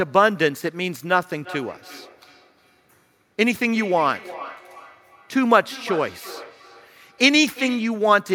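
From 1.34 s to 8.11 s, feedback echo between two devices: a second device replays the call and its microphone recaptures it, beyond the echo canceller's reach. Repeats return every 0.4 s or so, about 18 dB below the speech, unlike reverberation's smooth decay.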